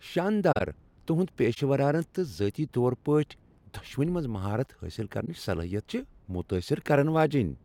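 The speech is muted or smeared at 0.52–0.61 s, 1.53–1.58 s and 5.25–5.28 s, just after "منٛز مہارت حٲصل". This is a corrupt frame concealed: the decoder detected damaged AAC frames and covered them itself.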